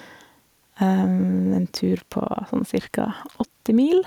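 Throughout the speech, the level pumps, swinging by about 5 dB. Loud and quiet passages sit unnaturally close together, leaving the sound squashed and flat. This is gain pumping, likely from the input gain being set far too high, so a fast compressor or limiter clamps down on each loud moment and then releases in the gaps.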